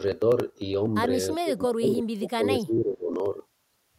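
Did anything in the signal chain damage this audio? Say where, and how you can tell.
Yes, in call processing: from 1.33 to 3.13 s the speech dips by up to about 20 dB, around a second and a half in total. That's speech suppressed in double talk, likely the echo canceller mistaking overlapping far-end talk for echo and ducking everything.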